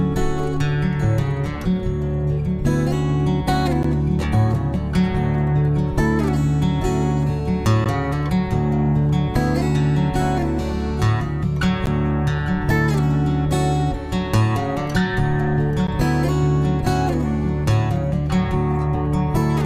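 At 3.83, 7.84, 11.86 and 15.87 s the sound stops abruptly for about 13 ms: a gap between chunks. The audio arrives in 4-second blocks with silence inserted at each join, so nothing is lost, but hard-edged holes recur at regular intervals.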